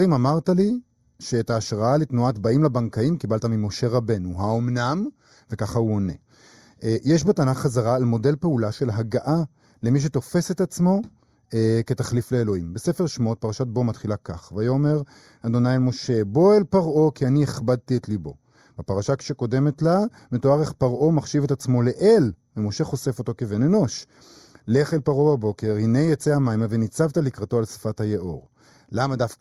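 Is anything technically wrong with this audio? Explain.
Yes. Channel delay with comb filtering runs through the whole speech clip. One channel lags the other by roughly a fifth of a millisecond. Summed to mono, shared content cancels at evenly spaced frequencies, the first near 3 kHz. The result sounds hollow and phasey.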